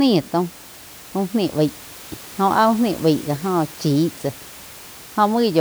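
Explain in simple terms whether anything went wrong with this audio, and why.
Nothing went wrong with this speech recording. A faint background noise from the room sits well below the talking; it was picked up by the microphone along with everything else.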